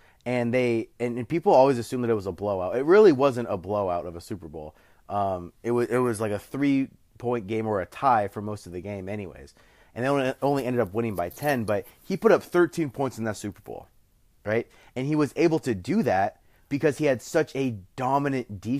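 From 12.35 to 13.22 s the speech suddenly slows and drops in pitch together, running about 5.4% slow and sitting nearly a semitone flat (around 96 cents down) before snapping back to normal. The lowered, dragged quality is what stands out. This is likely a drift correction step: clock-matching software briefly changed the playback rate in one jump to rebalance its buffer, shifting speed and pitch at once.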